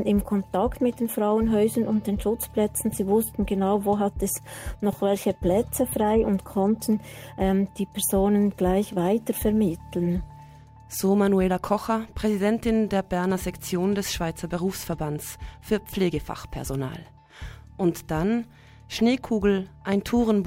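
Dropped samples at 5.89 s produce a single sharp click. The likely cause is a handful of samples, a fraction of a millisecond, missing from the stream, so the waveform leaps straight to a later value. Nothing audible is lost beyond that brief, hard tick.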